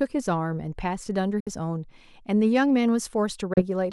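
At 1.40 s and 3.53 s the speech cuts to silence for about 80 ms. Each gap is a likely Bluetooth dropout: late packets were discarded. Speech resumes further on, skipping roughly 60 ms and 30 ms.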